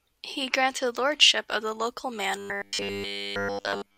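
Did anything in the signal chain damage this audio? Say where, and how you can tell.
Yes. Right after "of the local", from 2.36 s to the end, the speech turns into a 100 Hz robotic sound from repeated short buffers, likely a buffer-stage underrun looping one 10 ms chunk.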